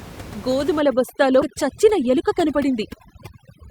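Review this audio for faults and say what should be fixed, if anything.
From 0.80 s to the end, overdone noise removal leaves the background lowered and broken up into twinkling specks, while quieter parts of the speech are cut away with it. Room noise about 16 dB below the speech fed an over-aggressive suppressor, which cut individual frequency bands whenever they came close to its noise estimate. Unlike a low-pass filter, the damage flickers band by band rather than removing everything above one fixed frequency. Lowering the suppression strength, or setting a floor on how far any band may be cut, would prevent it.

At 1.41 s there is a skip ahead. Playback jumps forward with no gap, dropping roughly a fifth of a second of speech and joining the two sides almost directly, which points to a jitter buffer discarding audio that had piled up. Unlike a dropout, no silence or filler is heard, only missing material. 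Letting the buffer shrink gradually, rather than dumping a block at once, would prevent it.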